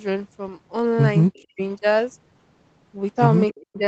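From 1.28 to 1.61 s the speech dips sharply, by about 40 dB at its deepest, for roughly a third of a second in total. This is speech suppressed in double talk, likely caused by the far side talking at the same moment: the echo canceller could not tell this talker from its own loudspeaker echo and turned everything down together. Inside that stretch, from 1.34 to 1.43 s, a faint delayed copy of the voice slips through, about 35 dB below the speech and trailing it by 290 ms. This is echo leak, likely where the loudspeaker's output reached the microphone and was not fully cancelled. A louder scrap of the same echo, about 25 dB down and again 290 ms late, appears from 3.49 to 3.61 s. Right after it, from 3.61 to 3.79 s, the speech is pushed down once more by about 40 dB, for roughly 200 ms. That second dip is speech suppressed in double talk again, likely as the canceller reacts to overlapping sound on both sides of the call.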